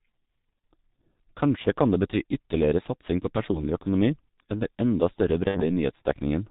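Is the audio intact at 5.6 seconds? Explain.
No. Around 5.48 to 5.62 s there's a gap from VoIP packet loss concealed by the speech codec. About 60 ms of audio went missing, which fits two dropped 30 ms frames. The decoder covered it by replaying its last pitch and filter shape at falling gain, so the sound smears into a short buzzy tone or coloured noise that fades. Because each frame builds on the one before, things stay weak or distorted for a moment after packets resume.

All of that sits on the G.723.1 codec damage that runs through the whole clip, and it's heavy here, which fits the 6.3 kbit/s mode. With nothing coming through above 4 kHz, the speech is muffled. The slow-updating voice model leaves it hoarse, with consonants blurred. So even outside the dropout, 5.6 s is hardly clean.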